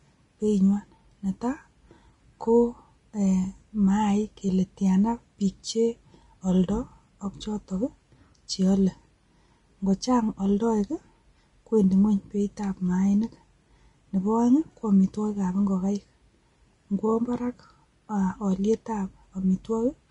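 Throughout the speech, the treble sounds hissy and grainy, with consonant attacks smeared and tones roughened, and nothing is left above about 10.6 kHz. The cause is likely Vorbis compression at a low setting, which fits a bitrate of around 31 kbps. To save bits, the encoder cut off the top of the spectrum and quantised the remaining upper band so coarsely that its fine detail was replaced by noise of similar energy.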